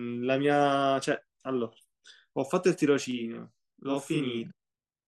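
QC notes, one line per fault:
3.11–5.08 s, channel delay (doubling): one channel runs 40 ms late and both are summed to mono, so every syllable is followed by an equal-level copy. The waveform shows onsets doubled 40 ms apart. The spectrogram shows fine comb striping spaced 25 Hz.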